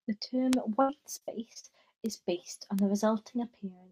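A speech clip with two kinds of digital fault. Bit error spikes land at 0.53 s, at 2.06 s just before "based on the", and at 2.79 s just after "based on". Each is a single sharp tick, unrelated to the speech, where a flipped bit throws one to three samples far off by a power of two before they snap back. On a waveform each is a lone vertical needle. On a spectrogram it is a thin full-height line. From 0.81 s to 1.66 s comes repeated packet loss, giving a choppy, robotic stretch. Audio repeatedly dropped out, and each hole was papered over by extending the preceding sound. Roughly a quarter of that span, about 220 ms in total, is patched this way, with the longest hole about 75 ms. The waveform shows the envelope breaking into repeated, too-regular chunks. The spectrogram shows smeared, frozen harmonic bands where the patches sit.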